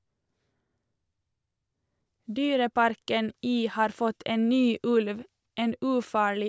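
Nothing in this speech recording stood out as a technical problem on listening.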